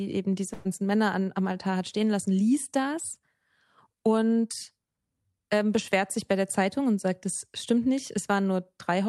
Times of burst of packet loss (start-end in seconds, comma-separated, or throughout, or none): 0.53-0.67